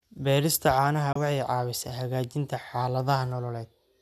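At 1.13 to 1.16 s the speech falls silent in a digital broadcast dropout. A quick 3 ms fade, not a click, leads into the hole. The receiver muted over about 24 ms, which fits one corrupted frame. That sound is skipped outright, not delayed or replayed as in an underrun.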